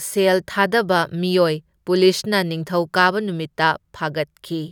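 Nothing technically wrong can be heard in this speech recording, and the signal holds together without any audible fault at any point.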